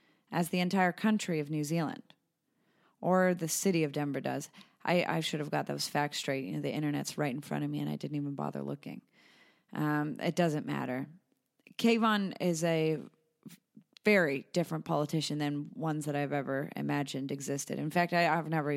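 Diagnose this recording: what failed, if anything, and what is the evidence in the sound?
Nothing failed; the speech carries no audible evidence of a fault at any stage of the chain.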